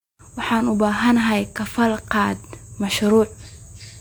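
No technical faults can be heard anywhere in this speech recording.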